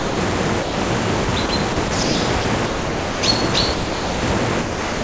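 A clip of everyday sounds, carried over a G.722 call path with nothing above 8 kHz, shows sound dropped by the voice detector at 0.00–0.17 s, 0.62–0.77 s, 3.74–4.22 s and 4.61–5.03 s. Each time the sound gives way to steady synthetic noise lasting 150 to 480 ms. The likely cause is the sender's detector classing the sound as background and stopping transmission, with comfort noise filling the gap. Sound chopped by the voice detector appears at 1.25–2.15 s, where about 240 ms in total is replaced, and at 2.42–3.23 s, where about 600 ms is replaced. The detector likely toggled repeatedly, so the sound breaks up.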